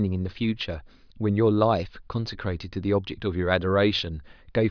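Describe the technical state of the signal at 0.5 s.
At 0.5 s the signal is intact, with no audible fault at that moment.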